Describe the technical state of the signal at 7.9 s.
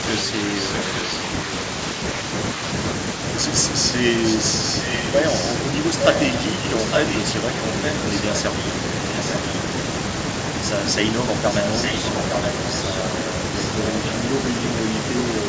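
An echo leak spans 7.68 to 8.34 s: speech returns 0.86 s late, about 5 dB quieter, likely slipping past an echo canceller, showing as duplicated, offset spectrogram patterns.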